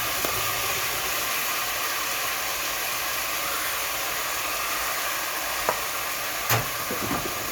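No technical faults can be heard anywhere in the recording.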